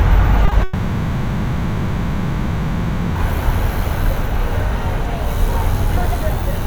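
At 0.45 s and again at 0.49 s come two back-to-back short concealed packet losses, each about 20 ms of audio that arrived too late and was patched by extending the preceding sound. Together they form a brief smear or wobble, and a spectrogram shows slightly blurred, repeated texture where fine detail should be.

From 0.63 s to 3.17 s, roughly 2.5 s of real audio is missing, replaced entirely by synthesized continuation with no silent gap. The likely cause is a long network dropout. It is heard as a drawn-out buzz or hiss that fades before the audio resumes. On a waveform it appears as a smooth, decaying envelope. On a spectrogram it shows as smeared, featureless energy until the sharp return at 3.17 s.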